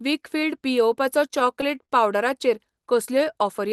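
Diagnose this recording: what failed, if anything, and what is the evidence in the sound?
Repeated stalls (stutter) at the network and jitter-buffer stage, from 1.39 to 1.91 s, just after "वीकफील्ड पियेवपाचो". The speech hitches four times, with the receiver stretching the last sound for about 64 ms in all, the longest hold 38 ms. Packets arrived late rather than being lost, so nothing is cut out; the speech drags instead of dropping out.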